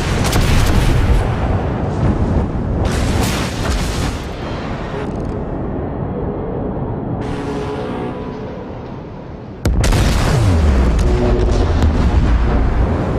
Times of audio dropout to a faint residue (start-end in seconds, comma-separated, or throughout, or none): none